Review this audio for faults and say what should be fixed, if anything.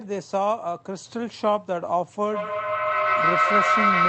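A feedback howl begins at 2.22 s and runs to the end: a second device in the room feeds the loudspeaker back into the microphone with gain above unity, so a tone near 1.5 kHz swells, with a loop delay of roughly 150 ms, to about 5 dB above the speech. To prevent it, mute all but one device in a shared room, or use headphones.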